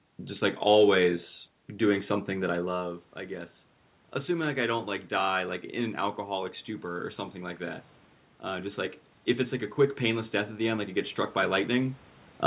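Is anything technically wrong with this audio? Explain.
Yes. From 8.44 s to 11.97 s there is automatic gain rising. The gain control judged the input too quiet and pushed its gain up slowly, by about 4 dB over roughly three and a half seconds. The voice and the room noise swell together. That shared rise marks it as a gain change, not a talker moving closer. The call path's band limit at 4 kHz, consistent with a 64 kbps G.711 A-law codec, can also be heard throughout.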